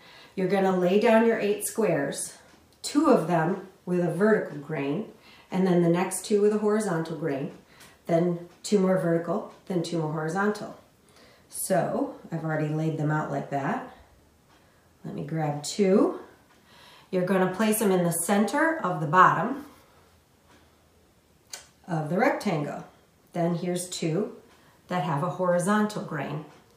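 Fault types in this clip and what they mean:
Nothing stood out as wrong on listening to this recording.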